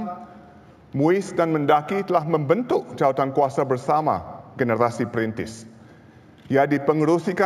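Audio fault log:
Throughout: imaging from linear upsampling. The sample rate was raised by joining the original samples with straight lines. That interpolation is a weak low-pass filter. It softens the top of the original band and lets a mirrored copy of the spectrum through. Here that copy sits between 8 kHz and 16 kHz, which fits a rise from 16 kHz to 48 kHz. It lies roughly 35 dB below the signal and adds a metallic shimmer above the true content.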